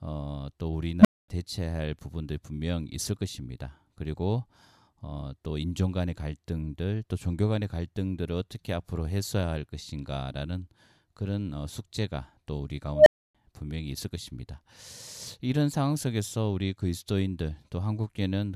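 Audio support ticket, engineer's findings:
Unstable filter, 1.00–1.28 s and 12.93–13.35 s. Tone near 200 Hz, then near 700 Hz, swells over about 50 ms and 130 ms, clips, and cuts out for about 240 ms and 280 ms. Recursive filter stage with bad coefficients; output diverges, overflows, resets.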